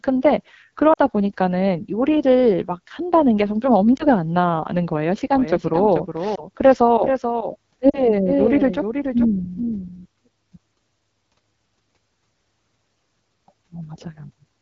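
Throughout, the speech carries AMR wideband (HD Voice) codec damage. It sounds rough and raspy. The top band is a noisy hiss rather than real detail. That fits one of the lowest AMR-WB modes, about 8.85 kbit/s. At that rate the voice model struggles.

Lost AMR speech frames appear at 0.93 to 0.98 s and 3.97 to 4.06 s. The decoder bridged each gap by repeating the last good settings at falling gain. The sound briefly dips toward silence, then returns rough. The first gap fits two lost 20 ms frames.

From 5.31 to 10.05 s there is a doubled audio track. A second full-band copy follows about 0.4 s behind, a few dB quieter. It has no reverberant tail and cuts in and out abruptly. The likely cause is the same audio arriving twice through a slower path.

More lost AMR speech frames fall inside that stretch, at 6.35 to 6.45 s and 7.89 to 8.09 s. The first gives a brief dip. The later one is longer and fits two lost frames. 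It fades further before the speech recovers.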